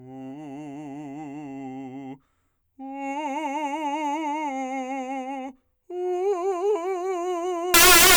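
A music clip whose last stretch, from 7.74 s to the end at 8.16 s, turns into loud, harsh broadband noise: samples built from the wrong bytes. The reader assembles each sample's bytes incorrectly, whether offset by one byte, in swapped order or with a wrong alignment, so the rapidly fluctuating low-order bits land in the most significant position. The music is replaced by broadband hiss at high level until the clip ends.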